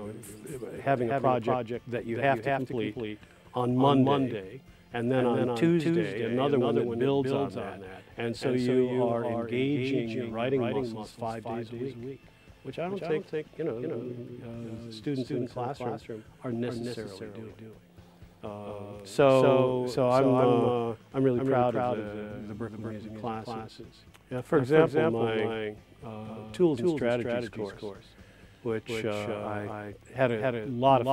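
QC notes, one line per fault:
Throughout, doubled audio track: every sound is followed about 200 ms later by a dry, full-band copy roughly 5 dB quieter, with no decay or room colour. This is likely a second capture of the same signal arriving late through a slower path and mixed back in.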